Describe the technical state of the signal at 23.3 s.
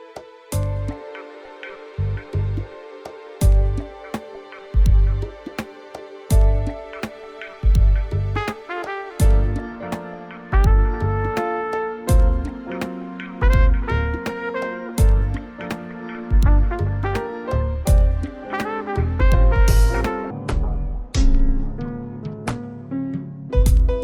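At 23.3 s the sound is slowed and deepened, dragging at a little over half its proper pace and sitting roughly ten semitones lower, so everything turns heavy and lumbering. This is a section at the wrong speed, running from 20.31 s to 23.50 s. Playback here runs at 0.545 times normal speed, so pitch and tempo fall together. The likely cause is this stretch being clocked at the wrong rate during editing or playback.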